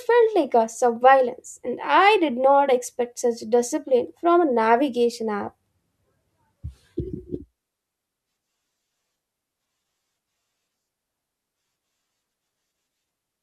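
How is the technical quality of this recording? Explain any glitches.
No glitches or technical faults are audible anywhere in the recording, so there is nothing to explain.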